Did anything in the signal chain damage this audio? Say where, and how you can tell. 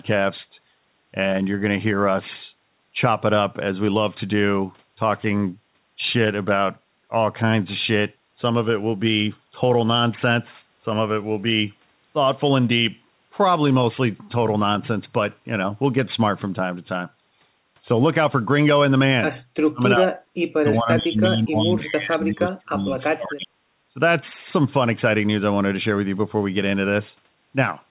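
Yes. The damage happens in call processing. The speech dips sharply, by about 30 dB, from 19.69 to 20.1 s and again from 20.55 to 23.59 s. This is likely speech suppressed in double talk. The echo canceller confused the talker with loudspeaker echo and turned both down.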